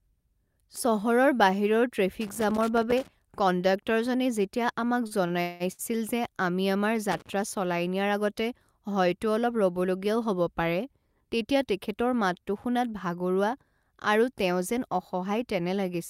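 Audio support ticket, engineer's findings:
Loose connector crackle, 2.21–3.08 s and 7.12–7.33 s (second burst just after "যে আমি আমাৰ"). Worn or dirty contact making and breaking. Irregular scratching, not clean gaps. Chopped signal, unlike network dropouts. Check cable and jack.

Repeated stalls (stutter), 5.07–5.81 s, ending right before "যে আমি আমাৰ". Jitter buffer underran four times; the receiver stretched the last sound, longest hold 183 ms, 311 ms filled in all (42% of span). Nothing lost, only dragged, unlike packet loss.

Jitter buffer speed-up, 10.99–11.56 s. Buffer over target; receiver trimmed pitch-period pieces, around 50 ms total. Sound runs at 107% speed, hurried but at unchanged pitch, unlike a resampling or clock error, which shifts pitch too.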